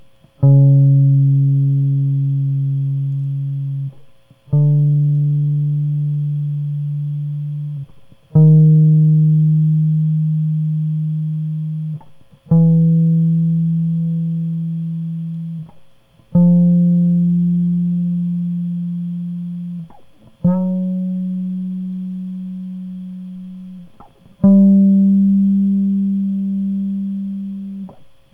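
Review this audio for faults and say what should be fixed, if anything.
Sample clock jitter runs through the whole music track. The converter's timing wanders by a couple of microseconds, so each sample lands slightly early or late. That timing error costs the most where the waveform changes fastest. A faint hiss and roughness therefore rides on loud passages and bright, high-frequency content, sitting roughly 55 dB below the music. It drops away in quiet moments. To prevent it, clock the converter from a clean, stable low-jitter source.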